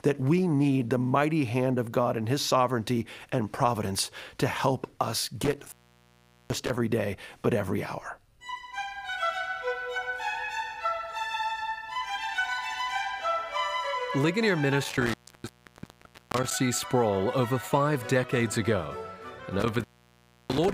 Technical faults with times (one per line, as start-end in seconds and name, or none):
5.44-6.77 intermittent contact
14.84-16.53 intermittent contact
19.60-20.73 intermittent contact